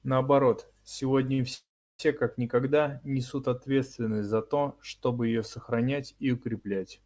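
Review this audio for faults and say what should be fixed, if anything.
Right at 1.34 s there's a short stall from a late packet: a sound gets held for about 45 ms, through to 1.40 s, with a faint buzzy smear. The packet didn't show up on time, the jitter buffer ran dry, and the receiver just stretched the last bit of audio until it landed, then carried on from the same spot. Nothing's lost; things just run 45 ms late from there. A slightly deeper jitter buffer, or one that adapts faster to arrival spread, would absorb a hiccup this small.

The bigger one is a call audio freeze from 1.54 s to 2.01 s, roughly 447 ms in all. You hear the last sound drawn out into a fading buzz, then about 330 ms of silence before the audio picks up exactly where it stopped. So again nothing's missing, but nearly half a second of gap has been spliced in. That pattern points to packets likely being held up somewhere along the network, long enough to fully drain the buffer. 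Tracking down the congestion or queuing on the route, or prioritising the audio traffic, is the fix here.

The band limit is nothing to fix: the G.722 path cuts everything above 8 kHz as that codec does.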